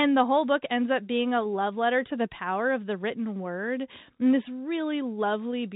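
No faults are audible in the speech; it carries the narrow band of G.711 telephone coding, with nothing above 3.8 kHz.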